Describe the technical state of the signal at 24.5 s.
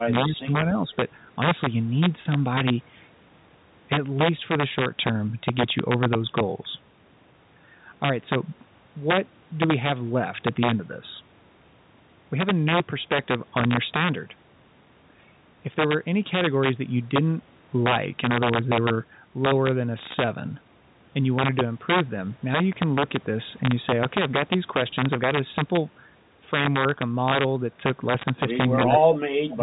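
At 24.5 s you're hearing integer overflow, which runs through the whole speech clip. The level is pushed about 3 dB past full scale, and instead of being limited, the loudest peaks wrap around to the opposite sign. On under one percent of samples, that produces harsh, sharp cracks well beyond ordinary clipping.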